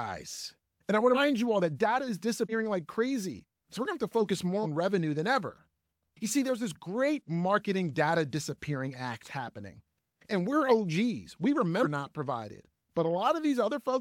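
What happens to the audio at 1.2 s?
Right around there, from 1.14 to 1.18 s, there's a compressed frames skip: about four frames of roughly 46 ms each never get decoded, so the sound leaps forward around a fifth of a second.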